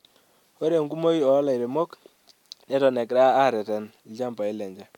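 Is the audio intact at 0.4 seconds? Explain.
Yes, the audio is intact at 0.4 seconds, with no dropout, click, distortion or other fault at that moment.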